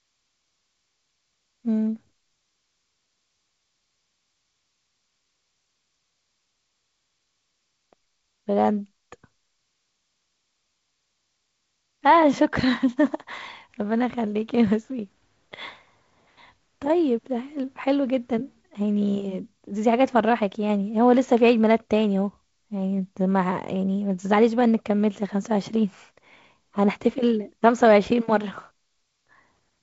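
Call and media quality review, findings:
No faults found.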